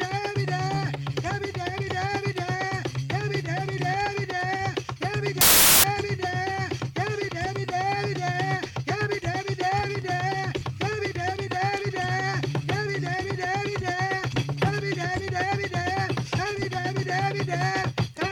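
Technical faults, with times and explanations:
5.41 to 5.84 s, samples built from the wrong bytes: for about 0.43 s the sound is swallowed by loud, harsh broadband noise. The reader put each sample's bytes together wrongly. It may have been off by one byte, swapped the byte order or used the wrong alignment. The fast-changing low bits then became the large part of each value. That turns the signal into dense, harsh noise.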